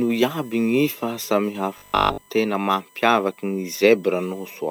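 A steady 1 kHz whine runs under the speech from start to end. This is USB whine. The bus draws current in 1 ms frames, and that pulsing leaks into the audio through power or ground. It sits about 30 dB below the speech.

From 1.78 s to 2.28 s the speech turns rigid and metallic, with a 50 Hz buzz. This is robotic sound from repeated short buffers. Audio likely arrived too late, so a 20 ms chunk was replayed over most of this stretch while new sound was skipped.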